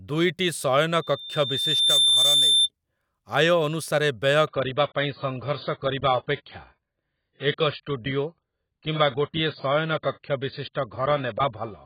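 A thin whistle rises out of the speech at 1.01 s and swells over about a second into a piercing squeal near 3.6 kHz, peaking at roughly 5 dB above the talker before it stops at 2.69 s. This is loudspeaker feedback squeal. The microphone is hearing the loudspeaker it drives, and around 3.6 kHz the loop gain tops unity, so that one frequency keeps reinforcing itself until the loop is broken. Then, from 4.48 s to the end, the speech suddenly turns dull, with nothing left above 4.8 kHz and more codec smearing, yet with no gap in the sound. That is an adaptive stream at a lower bitrate. The player switched to a cheaper rendition when the connection slowed, and the loss of treble fits a step down from roughly 96 to 16 kbit/s AAC.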